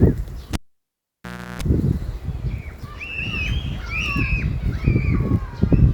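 A pop at 0.53 s drops the sound to near silence for about 1.04 s, then a 60 Hz mains buzz lasting roughly 350 ms and a second pop bring it back by 1.62 s. This is a cable pulled and plugged in: the live lead was withdrawn, and the buzz came from the plug's tip touching before full contact.

From 4.20 to 4.51 s the sound runs hurried, at about 121% speed, yet its pitch stays unchanged. That is a jitter buffer speed-up: the receiver held excess audio and trimmed short pitch-period slices, removing somewhere around 70 ms in total, to reduce delay.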